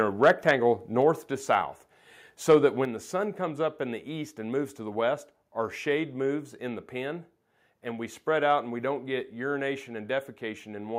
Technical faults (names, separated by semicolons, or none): microphone overload; microphone volume stepped down